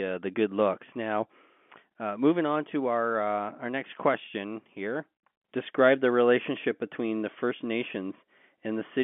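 No technical faults occur at any point in the speech, which comes through the narrow band of G.711 telephone coding as expected.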